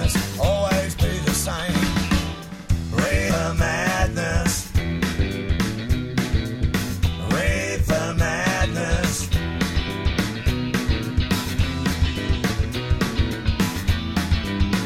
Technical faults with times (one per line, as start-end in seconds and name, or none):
3.29 CD skip